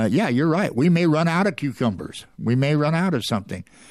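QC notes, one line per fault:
Nothing to flag here, the speech comes through with no faults to note.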